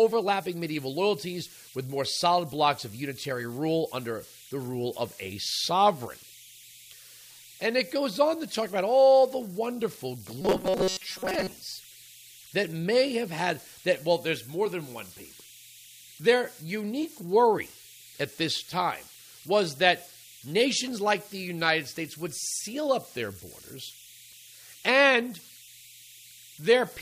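Throughout the speech, converter idle tones whistle near 3 kHz, about 24 dB below the signal. An undithered delta-sigma converter cycles through repeating bit patterns on quiet input.

From 10.42 to 11.51 s the voice becomes a rigid metallic buzz at 188 Hz. This is likely robotic sound from repeated short buffers: roughly 5.3 ms chunks replayed while most of the real audio is skipped.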